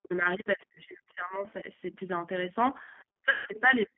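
Throughout the recording the speech has the rough, slightly synthetic grain of the G.729 codec, and the damage is plainly audible. The band is held to roughly 200 Hz to 3.5 kHz, which fits an 8 kbit/s low-rate VoIP coder rebuilding each frame from a vocal-tract filter, a pitch predictor and a few pulses. Unlike ordinary telephone band-limiting, the roughness stays on every syllable rather than only dulling the sound.

From the start to 1.46 s, the talker's level sinks for about a second in total, at worst by around 40 dB, with parts thinning or dropping out. This is likely speech suppressed in double talk: the echo canceller, hearing both ends at once, turned the near talker down along with the suspected echo. A brief repeat at 1.62 to 1.67 s is shallow, about 5 dB. What separates this from packet loss is that the sound is attenuated, not replaced by a buzzy stand-in.

Between 1.49 and 1.53 s a faint scrap of a second voice comes through, about 40 dB below the talker. 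This is likely the other side's voice leaking through, where residual loudspeaker echo escaped cancellation. Its very low level and foreign timbre set it apart from a codec artefact on the talker's own speech.

Suppression returns from 3.17 s to the end, again at worst around 40 dB, for about half a second in total. Inside it, from 3.31 to 3.48 s, 150 ms of audio is missing. The VoIP packet loss is concealed by the speech codec, which extrapolates from the last pitch and filter into a stand-in sound that fades frame by frame. The decoder then needs a short while to recover after the packets return. That synthetic stand-in is the clue that separates it from the plain level dips caused by the echo canceller.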